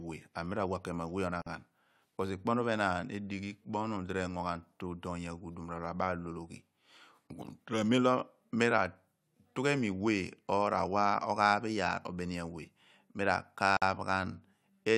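At 1.42 s the speech drops out for about 47 ms, and at 13.77 s it does so again for about 49 ms. Both are a gap at a join of encoded pieces, where separately encoded segments were butted together without trimming the encoder's leading delay and final-frame padding. Each is heard as a brief hole with smeared edges before the speech resumes exactly where it left off. On a waveform it shows as a flat stretch. On a spectrogram it is a clean vertical blank band, its edges slightly smeared.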